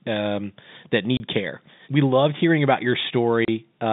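Packet loss filled with silence hits at 1.17 s and again at 3.45 s, each a 30 ms hole where the speech drops to nothing with hard edges. Each gap fits one lost 30 ms packet that the receiver replaced with silence over the narrowband telephone line.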